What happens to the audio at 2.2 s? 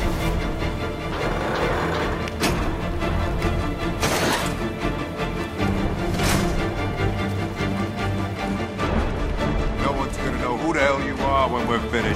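Nothing goes wrong at 2.2 s; the audio runs through that moment intact, with no dropout, click or other fault.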